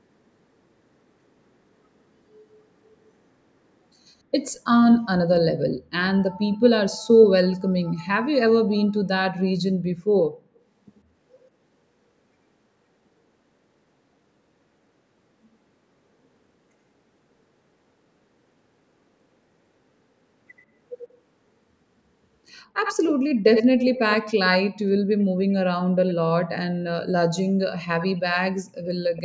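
Echo leak, likely from an echo canceller missing loudspeaker pickup, leaves delayed copies of the speech at 6.53–6.58, 10.95–11.01, 25.2–25.53, 26.08–26.14 and 28.85–29.22 s, and nearly full-level from 22.6 to 24.49 s. Spectrograms show harmonics repeated 82–110 ms later.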